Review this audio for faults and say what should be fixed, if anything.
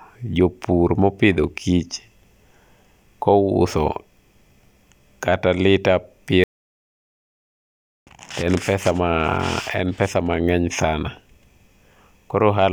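Audio dropout to silence from 6.44 to 8.07 s, between "kata lita" and "en pesa ma": flat-line waveform, blank spectrogram, no room tone, likely a dropped input. Secure connections and watch live input meters while recording so a lost signal is caught and the section re-recorded.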